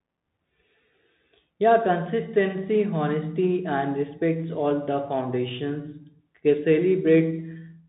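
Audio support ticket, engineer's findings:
Bluetooth CVSD headset codec, whole clip. Speech band-limited, nothing above 3.8 kHz. Sibilants scratchy, granular hiss under the speech, loud bright peaks distorted. Component: headset Bluetooth link. Mechanism: one-bit up/down delta coding with adaptive step cannot keep pace with fast, high-level slopes, giving slope overload plus grain noise. Sound fits a 64 kbit/s CVSD stream. Codec damage plainly audible.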